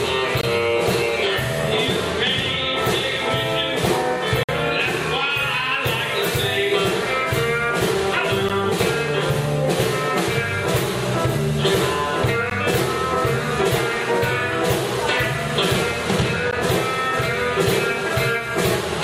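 Gaps between stream segments, at 4 s intervals where timestamps misalign, cut hard-edged silences at 0.41, 4.43–4.49, 8.49, 12.50 and 16.51 s, showing as blank vertical strips.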